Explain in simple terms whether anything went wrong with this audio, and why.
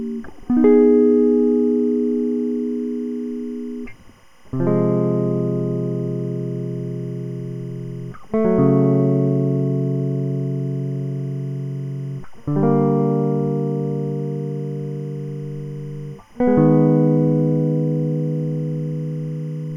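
A timecode signal leaked into the recording. This is timecode bleed: a synchronisation code, running here at 25 frames per second, sat on a nearby track or cable and crept into the music's path. That code is a square wave flipping between two pitches, around 1 kHz and 2 kHz. From the very start to the end, it comes through as a faint, steady chirping warble behind the music, quiet but always present.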